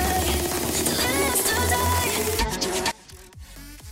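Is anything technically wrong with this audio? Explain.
Yes. From 2.91 s to the end at 3.91 s the sound abruptly drops by about 22 dB, leaving a faint remnant. The likely cause is one channel inverted: one stereo channel has flipped polarity, so when the channels are summed to mono their shared content cancels and only their difference survives. On a waveform the amplitude collapses sharply at 2.91 s; a spectrogram shows the energy thinning out.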